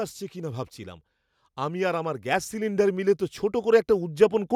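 From 0.33 s to 4.51 s the level climbs steadily by about 8 dB: automatic gain rising, as the gain control judges the input too quiet and slowly turns it up. Unlike a talker getting louder, the background noise swells in step with the speech.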